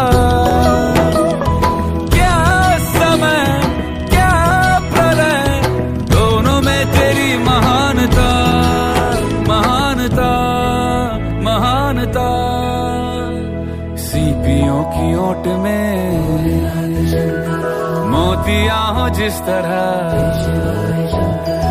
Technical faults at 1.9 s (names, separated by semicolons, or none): periodic USB or driver dropouts